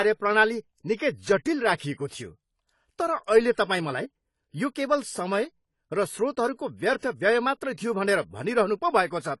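It's a short speech clip, and the whole thing sounds dull and smeared, with nothing above 11.5 kHz. That's most likely heavy AAC compression, consistent with a low bitrate around 32 kbps. There's also audible pre-echo, a brief hiss smeared ahead of sharp attacks, at 0.96 to 0.99 s and again at 1.77 to 1.80 s, as the codec's block noise spills in early.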